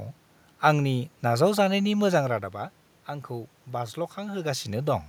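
Nothing technical stood out on listening to this speech recording; the room's own background noise and the level shifts around 2 s and 4.5 s, where the talker seems to move relative to the microphone, belong to the recording itself.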